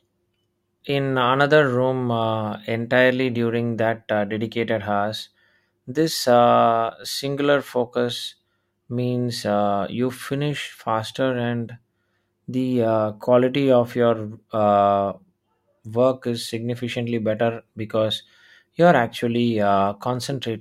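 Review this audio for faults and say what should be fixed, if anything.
Nothing needs fixing; no faults are audible.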